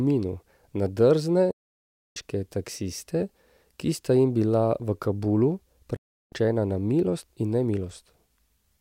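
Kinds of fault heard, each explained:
Digital broadcast dropout: The speech fades out within about 8 ms into dead silence twice, from 1.51 to 2.17 s, right after "na drzne" and resuming at "taksiste ki sta jim", and again from 5.96 to 6.33 s. Whatever was said during those gaps is missing. The receiver lost the signal or rejected corrupted frames and muted until valid data returned. Gaps of 640 and 352 ms fit whole 32 ms frames being discarded.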